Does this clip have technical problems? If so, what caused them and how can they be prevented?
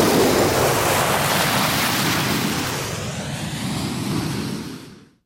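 No technical problems detected.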